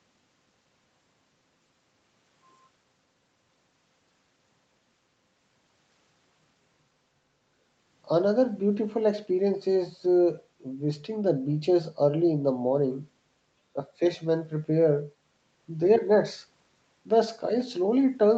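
Nothing here counts as a fault: the speech has simply been through a call's microphone processing, so the deepest bass is trimmed away and nothing reaches above 8 kHz, both just what that path normally does.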